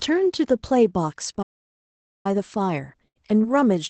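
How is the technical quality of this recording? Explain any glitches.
The speech has four audible glitches, all after the first second, heard through a call codec whose top end stops around 8 kHz.

Playback stall, 1.42 to 2.26 s: the sound cuts out mid-flow for about 0.82 s, then carries on. This is likely the player running short of data or having its output thread blocked, leaving silence until it caught up.

Burst of packet loss, 3.08 to 3.17 s: about 80 ms of audio never arrived. The receiver stretched the preceding sound for roughly 75 ms, fading it as a held buzz or hiss, then jumped ahead with that stretch missing.

Short concealed packet loss, 3.41 to 3.45 s: about 20 ms arrived too late to decode. The receiver extrapolated the last sound to cover the gap, then blended back into the real signal, giving a brief smear or wobble.

Lost packet rebuilt from error correction, 3.43 to 3.45 s: the next packet carried a low-bitrate Opus copy of a lost 20 ms frame, so no gap is heard. 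That rebuilt frame sounds rougher and noisier than its surroundings.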